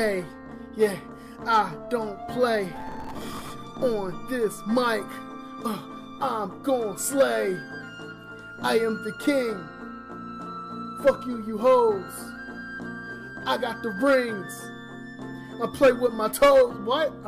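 Processor overload crackle runs from 2.76 to 3.50 s: buffers of roughly 5 ms miss their deadlines repeatedly, replaying stale audio with hard edges as gritty tearing.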